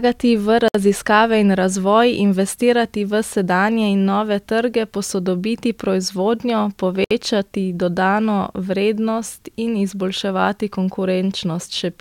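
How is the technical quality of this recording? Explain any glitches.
The speech is broken twice by a gap at a join of encoded pieces. Separately encoded segments were spliced without trimming each run's start-up delay and padded final frame. The result is a gap of about 62 ms at 0.68–0.75 s, and another of about 64 ms at 7.04–7.11 s, just after "nove trge posodobiti proizvodnjo". Each gap has smeared edges, and the speech then resumes exactly where it stopped.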